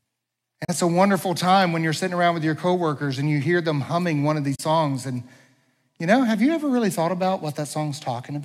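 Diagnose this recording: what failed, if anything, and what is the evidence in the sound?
Two brief soft-edged dropouts occur at 0.64–0.70 s and again at 4.55–4.60 s. The sound fades out, leaves a gap of about 43 ms, and fades back in. This is AAC frame loss with muting at the codec stage. The decoder zeroed the spectrum of the missing frames, and the overlapping transform windows smoothed the edges into fades. The 43 ms length points to two consecutive lost frames of roughly 21 ms each.

From 7.17 s to the end, a steady buzz at 91.9 Hz sits on the speech, and the pace and pitch stay unchanged. This is a block size mismatch (truncated) in the driver or buffer chain. One stage hands over blocks slightly longer than the next stage reads, so a sliver at the end of each block is discarded. Those regular cuts repeat at the block rate and produce the buzz. The two sizes are nearly equal, so there is no audible speed-up.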